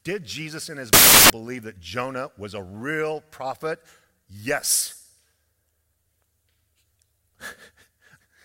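From 0.93 to 1.30 s the speech becomes loud, harsh broadband noise: samples built from the wrong bytes, with the reader misassembling each sample so the rapidly changing low bits dominate. The spectrogram shows a broadband wash, and the waveform a dense block.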